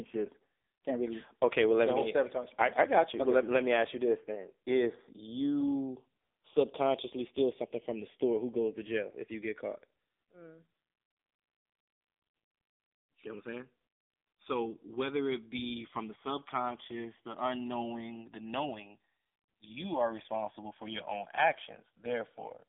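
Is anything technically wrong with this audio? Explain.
Yes, two problems run through the whole clip. First, the channels are drifting apart. The two sides seem to be clocked independently, off by something like 70 ppm, so the gap between them slowly grows to about a millisecond and a half. In mono, that sliding delay sweeps comb notches through the spectrum, giving a slow flanging swirl.

Second, it's been through the AMR narrowband mobile codec, and hard. The band sits roughly between 300 Hz and 3.7 kHz with nothing above 3.8 kHz, so the speech sounds like a phone line. The heavy buzzy, synthetic quality fits a low AMR-NB mode around 6.7 kbps.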